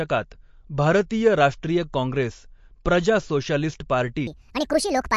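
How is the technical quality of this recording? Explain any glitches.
The recording has plainly audible codec damage throughout, a brief pre-echo, and a final stretch that plays at the wrong speed.

MP3 compression, throughout the clip: the damage is plainly audible and fits a low bitrate of around 48 kbps. With so few bits, the encoder discards weaker frequency components, and these come and go from frame to frame. Speech therefore takes on a watery, swirling texture, with chirpy sibilants and softened consonant onsets.

Pre-echo, at 1.10 s, just before "राष्ट्रीय काँग्रेस प्रजा सोशालिस्ट": a sharp onset lands late in a transform block, and the quantisation noise meant to cover that loud moment spreads back across the whole block. The quiet instant before the attack fills with a 10 ms smear of hiss, and the onset itself loses its crispness.

Section at the wrong speed, from 4.27 s to the end, after "राष्ट्रीय काँग्रेस प्रजा सोशालिस्ट": this final stretch runs 1.66 times faster than the rest, likely because an editor or player applied the wrong clock to it. 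Speed and pitch jump together at that point, raising the pitch by close to ten semitones. The speech turns abruptly high and hurried, with a chipmunk-like quality.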